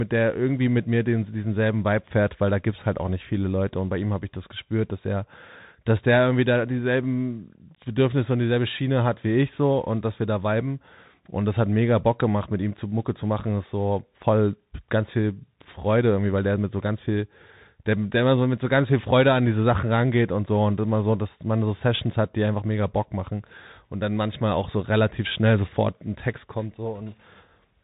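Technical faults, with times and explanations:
Throughout, Bluetooth CVSD headset codec: the speech is cut off above about 4 kHz, s sounds come out scratchy, and a grainy hiss sits beneath it. This fits a 64 kbps CVSD stream, whose one-bit up-or-down steps cannot keep pace with fast, loud waveform changes.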